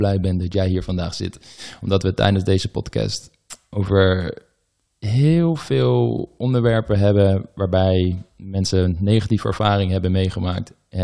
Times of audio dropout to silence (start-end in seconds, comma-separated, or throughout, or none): none